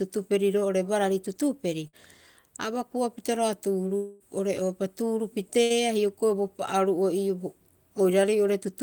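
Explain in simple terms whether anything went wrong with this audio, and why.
Twice the voice briefly smears into a short held buzz or fading hiss and then jumps ahead, at 1.87 to 1.96 s and again at 5.64 to 5.73 s. Each is a burst of packet loss: a few chunks of audio failed to arrive in time, so the receiver stretched the last sound for about 50 to 60 ms to cover the hole. When the audio resumes, about 60 ms of speech is simply gone.

A longer version of the same thing happens from 3.97 to 4.23 s. The sound drags on as a fading smear for about 230 ms, never dropping into actual silence, and then the speech picks up again with roughly 240 ms missing. This is most likely a long network dropout: for about a quarter of a second nothing got through, and the receiver kept extending the last sound it had until the connection returned.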